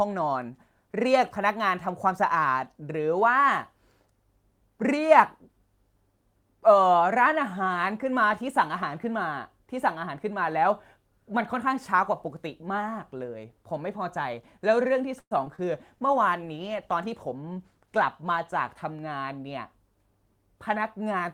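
Speech runs through a short burst of call-network trouble starting at about 15.2 s. From 15.19 to 15.33 s there is a call audio freeze: the sound stalls for roughly 115 ms, trailing off into about 60 ms of silence before resuming exactly where it stopped. This is most likely packets delayed in transit until the jitter buffer ran dry. Unlike a loss, nothing is missing, but a pause has been inserted. Right after come two short concealed packet losses, at 15.45 to 15.48 s and 15.56 to 15.60 s, each dropping about 20 ms of real audio that the decoder papered over with continued sound. These are heard as a brief smear rather than a pause, and the original material in those moments is gone. From 15.72 to 18.82 s a call bitrate drop from 32 to 18 kbps makes the speech rougher as the encoder works with fewer bits. That is a change in tone quality, not timing. Overlapping it, from 17.28 to 19.16 s, a jitter buffer speed-up plays the speech at 106% speed with unchanged pitch, cutting around 150 ms of backlog by dropping tiny pitch-period slices, so delivery sounds slightly hurried rather than degraded.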